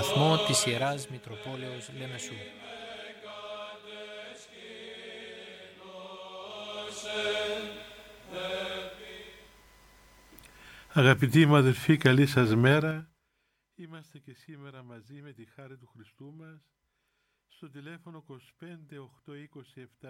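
From 12.73 to 13.28 s, a level drop of about 25 dB is applied in unsmoothed steps of about 4 dB, around ten a second, instead of a continuous ramp. Each step clicks, so zipper noise ticks audibly through the fade.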